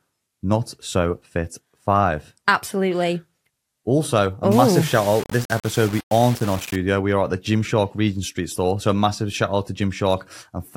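Low bit depth without dither from 4.52 to 6.76 s: grainy distortion tracks the speech, with quiet parts turning gritty, likely from rounding to about 5 bits.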